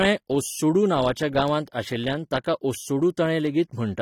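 From start to finish the speech carries plainly audible AAC compression damage, likely from AAC-LC at a low bitrate around 32 kbps, with nothing above 19.4 kHz.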